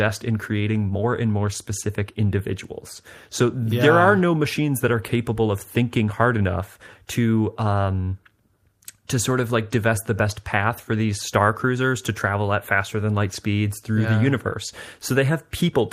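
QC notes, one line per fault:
No audible faults found anywhere in this speech recording.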